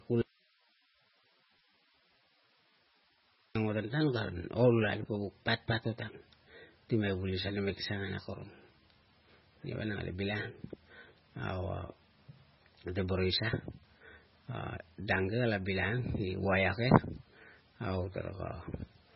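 At 0.22 s the speech cuts off abruptly and returns just as suddenly at 3.55 s. For about 3.3 s there is only hiss, roughly 35 dB below the speech. This is an audio dropout to a faint residue, likely a lost signal feeding a path that stayed live.

Throughout, the speech sounds watery and swirly, with smeared consonant attacks and nothing above 5.5 kHz. That is heavy MP3 compression, likely at a very low bitrate around 16 kbps. The encoder cut the treble and let weak frequency components flicker from frame to frame.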